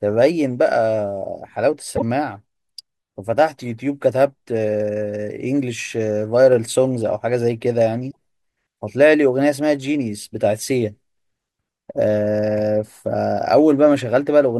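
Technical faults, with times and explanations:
1.93–2.02 s and 8.08–8.16 s: damaged data in a compressed stream. Corrupt frames are misdecoded until the decoder resyncs, causing brief glitches that show as broadband smeared blocks and abrupt waveform discontinuities.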